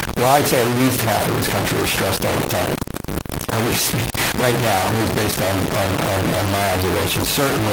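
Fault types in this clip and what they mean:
Low bit depth without dither: The speech is wrapped in a coarse, grainy distortion that rises and falls with the voice and is nearly as loud as the speech itself. This likely comes from truncating the signal to about 3 bits. Unlike dithered requantisation or ordinary hiss, which leave a steady noise floor, this grit tracks the signal, sputtering and dropping out in quiet moments, where the faint room noise sits well beneath the speech.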